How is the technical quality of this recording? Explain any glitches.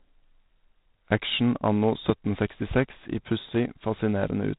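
The quality is limited throughout by codec damage.

G.726 ADPCM runs from start to finish. Each sample is coded as a few bits of difference from an adaptive prediction, and the coarse coding here fits about 24 kbit/s. Nothing passes above 3.8 kHz, and a harsh, rasping hiss rises and falls with the speech level.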